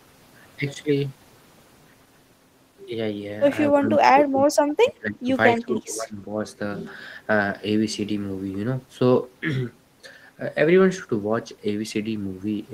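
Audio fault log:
3.75–5.29 s and 5.55–6.45 s: speech suppressed in double talk. The speech sinks by some 20 to 25 dB, likely an echo canceller ducking the near talker during overlapping speech.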